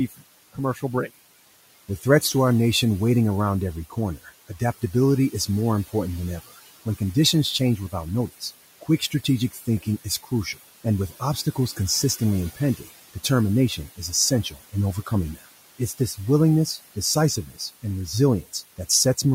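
A speech clip with noise suppressor artifacts throughout: the suppressor pulls the room's steady background, which sits about 18 dB below the voice, down by about 16 dB frame by frame, so the noise sinks between the words and rises under them. The same processing also causes speech cut by the noise suppressor, taking parts of the speech for noise at 0.08–0.83 s, 3.9–5.94 s, 7.59–16.18 s and 16.95–17.84 s. Within those spans, brief moments totalling around a second in the longest stretch drop by up to about 19 dB, leaving soft consonants and word endings swallowed.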